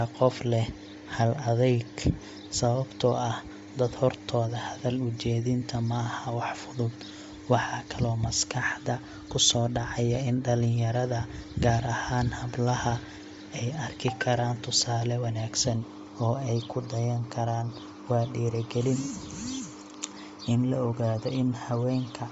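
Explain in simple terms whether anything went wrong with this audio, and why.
From start to finish the speech is cut off near 7.7 kHz and sounds grainy and breathy, likely from Bluetooth LC3 compression replacing the discarded treble with noise.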